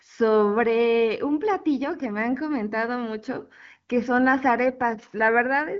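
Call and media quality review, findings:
Nothing to flag on this one: the speech comes through the HD Voice path with its band topping out around 7.2 kHz, which fits AMR-WB running at one of its higher rates, and no faults turned up.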